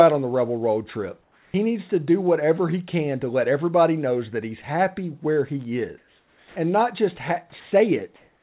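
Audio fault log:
1.22–1.54 s, 5.98–6.56 s, 8.16 s to the end, comfort noise in place of the background: in each gap the real room tone turns into flat, featureless hiss. It's about 5 dB quieter after "the rebel road trip" and before "needs to do whatever," about 3 dB quieter at 5.98 s, and about 4 dB louder at the close. The background is already faint there, roughly 37 to 45 dB under the loud parts. This is likely the sender pausing transmission while the receiver synthesises noise.
7.50–7.52 s and 7.60–7.72 s, sound dropped by the voice detector: right after "and not just," the sound briefly gives way to steady noise, losing about 10 ms and then about 60 ms. That's likely the detector mistaking sound for background and cutting it until it triggered again.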